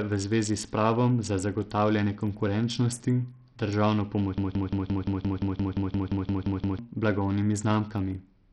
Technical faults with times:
0.00-8.52 Bluetooth SBC compression
4.38-6.79 broken-record loop

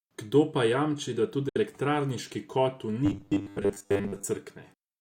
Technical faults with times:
1.49-1.57 Bluetooth dropout
3.06-4.24 robotic sound from repeated short buffers

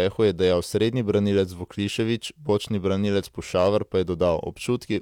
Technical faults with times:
3.58-3.68 hard clipping

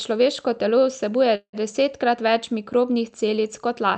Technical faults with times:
1.35-1.56 call audio freeze

